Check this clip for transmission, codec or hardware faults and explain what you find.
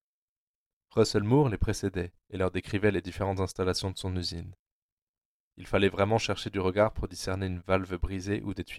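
One fault stands out. From 2.55 s, right after "les précédait et leur", through to the end, the speech carries a steady buzz at about 43.1 Hz. It comes from a block size mismatch (truncated): one stage writes 1024-sample blocks, the next reads fewer, and each block's tail is discarded, leaving a seam at the block rate.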